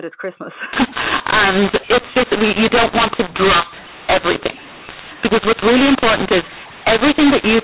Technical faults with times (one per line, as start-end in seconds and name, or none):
0.73-7.64 mu-law and A-law mixed up